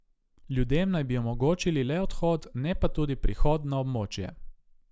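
No technical faults are audible anywhere in the speech.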